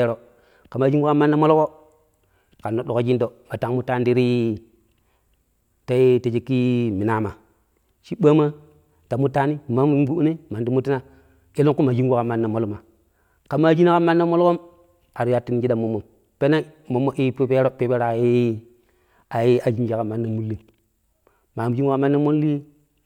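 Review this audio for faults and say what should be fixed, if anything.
No faults turn up in this speech audio, so nothing needs to be fixed.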